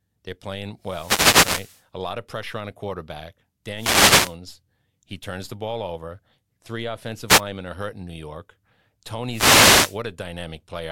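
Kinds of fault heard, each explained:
Wireless microphone noise hit: the radio link from an analogue FM mic dips whenever reflected signals cancel the direct one, so the receiver's own hiss surges up and, at the deepest point, crackles into clicks over the speech. You get four of these swishes of static here, at 0.81 to 1.85 s, 3.75 to 4.36 s, a very brief one at 7.27 to 7.41 s, and 9.27 to 10.0 s, with the first being the longest at about a second.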